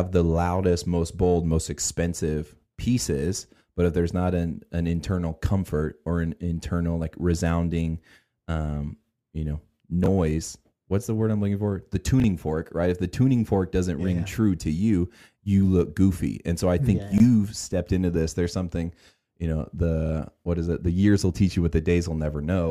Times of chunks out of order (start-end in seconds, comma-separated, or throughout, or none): 10.04-10.08, 12.20-12.24, 17.12-17.20